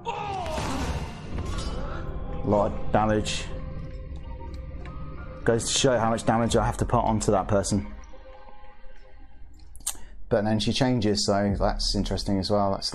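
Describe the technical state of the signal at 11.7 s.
At 11.7 s the signal is intact, with no dropout, distortion or other fault to be heard at that moment.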